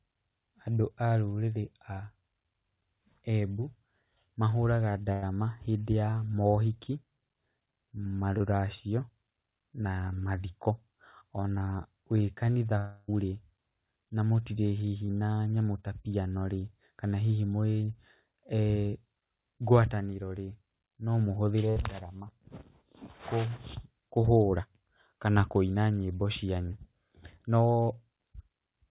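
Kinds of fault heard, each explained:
Burst of packet loss: Several consecutive packets arrived too late or not at all, so the receiver stretched the last sound and faded it. At 5.12 s about 100 ms and at 21.70 s about 60 ms become a held buzz or fading hiss, then speech resumes with that stretch gone.
Short concealed packet loss: About 20 ms of audio failed to reach the decoder in time, and the receiver patched the hole by extending the preceding sound before blending back in. At 8.38 s and at 15.06 s, just before "na nyamũ ta piano", this is heard as a brief smear or wobble.
Long network dropout: A gap of about 0.3 s from 12.78 s to 13.10 s, likely caused by a network dropout, was filled entirely by the receiver's continuation of the last sound, a buzz or hiss that fades without reaching silence, after which speech returns with that portion missing.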